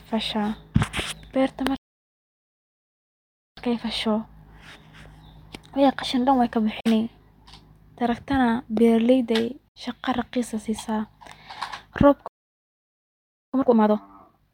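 Speech, interrupted twice by a playback stall and twice more by short Bluetooth dropouts. The first stall silences the output from 1.76 to 3.57 s, about 1.8 s, with the sentence halting mid-flow. A player that ran short of buffered data or had its output thread blocked is the likely cause. When sound returns it continues from the point where it stopped. A second stall from 12.28 to 13.54 s cuts out for about 1.26 s in the same way. Each stall is followed by time-compressed catch-up, as the player works off the backlog by dropping small slices of audio and cross-fading the joins. From 3.57 to 6.57 s the speech runs at 1.1 times normal speed. From 13.54 s to the end it runs at 2.0 times. Pitch stays where it was, but the delivery sounds rushed. The Bluetooth dropouts are much shorter gaps. The first runs from 6.80 to 6.87 s, about 46 ms. The second, from 9.68 to 9.77 s, about 70 ms, falls between "tarakta na beeraleyda ay" and "shaqa raqis". 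In both, the speech resumes slightly further on, as if it had kept playing through the silence. Packets that likely reached the headphones too late and were discarded would account for this, and the gap lengths fit the loss of two and three frames respectively.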